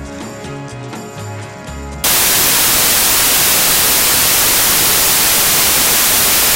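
Samples built from the wrong bytes, from 2.04 s to the end: the reader misassembles each sample's bytes, so low-order bits dominate, producing loud, harsh broadband noise over the audio.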